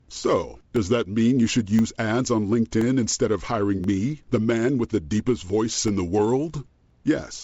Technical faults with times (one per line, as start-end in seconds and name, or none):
0.76-6.90 periodic USB or driver dropouts